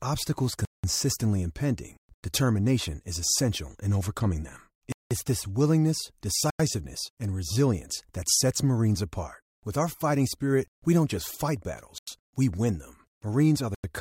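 Six blocks of digital silence cut through the speech, at 0.65 s (just before "impending determination is essential"), 2.14 s, 4.92 s (between "essential in overcoming them" and "this willingness"), 6.50 s, 11.98 s (between "we don't just fight" and "we win them") and 13.75 s. Each is a hole of silence, lasting about 0.19 s at 0.65 s and 4.92 s and about 0.09 s at the others. The two lengths, exactly double each other, fit output buffers of 4096 and 8192 samples that were not filled in time. A dropout of this kind is recognisable because the audio stops dead, with no fade, noise floor, or repeated or smeared sound filling the gap as concealment would.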